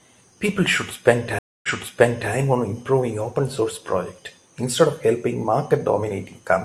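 At 1.39–2.32 s a stream reconnect leaves a 248 ms gap, blank on waveform and spectrogram; a fresh decoder resumes 0.68 s earlier, repeating speech.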